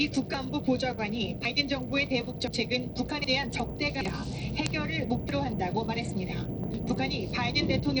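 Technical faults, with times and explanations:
Throughout, Bluetooth SBC compression: the treble thins out and flickers, with a gritty noise and aliasing riding on the sounds, likely from SBC at around 80 kbps starving the upper sub-bands of bits. A spectrogram shows ragged, patchy energy above the lower bands.
0.34, 1.45, 2.48, 3.24, 4.01, 5.29 and 6.74 s, dropped buffer (overrun): each is a sudden jump forward in the sound, no gap, where roughly a tenth of a second (nearer 150 ms at 4.01 and 6.74 s) vanishes, likely as captured samples are overwritten. The waveform shows an abrupt discontinuity at each splice.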